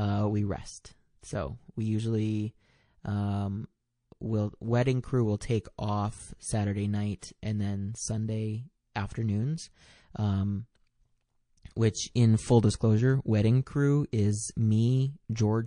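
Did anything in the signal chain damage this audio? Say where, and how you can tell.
Yes, at the codec stage. The speech has plainly audible codec damage from start to finish, with a watery, swirling quality as weak spectral components drop in and out from one frame to the next. This is likely MP3 compression at a low bitrate, and the sound fits roughly 40 kbps. At that rate the encoder cannot code every frequency line in each frame, so it discards the weaker ones and spends its bits where its hearing model says they matter most.

Pre-echo, also from the codec, appears from 7.19 to 7.22 s, just before "and then". A burst of hiss about 15 dB above the surrounding floor comes ahead of the attack and lasts about 32 ms. The encoder spread its quantisation noise across a transform window of about 52 ms and never switched to short blocks, so noise sized for the loud onset also filled the quiet stretch before it.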